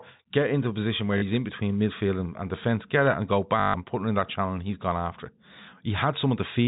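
Packet loss with the last packet repeated occurs at 1.18 to 1.22 s and again at 3.60 to 3.74 s. Audio went missing and the receiver filled each gap by replaying the last good stretch. The first 40 ms gap gives a brief hiccup. The 140 ms gap gives a robotic stutter buzzing near 50 Hz, which fits 20 ms packets, all over a narrowband telephone-style sound.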